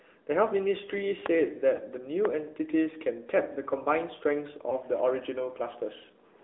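Across the whole clip the speech sounds boxy and buzzy, with nothing below about 300 Hz or above 3.6 kHz, which is the AMR narrowband mobile codec. It rebuilds the voice from a vocal-tract model, and the damage here, plainly audible, fits a mid-rate mode around 10.2 kbps.

At 1.76 to 1.80 s and again at 4.70 to 4.76 s there is a brief dip or warble. These are lost AMR speech frames, each consistent with a single 20 ms frame. The decoder filled the gap by repeating the previous frame's settings at reduced gain.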